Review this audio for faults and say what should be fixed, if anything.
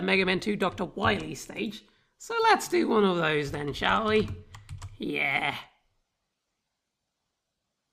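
Nothing needs fixing, as no technical fault can be heard anywhere in the audio. No correction or change to how it was captured or processed is called for.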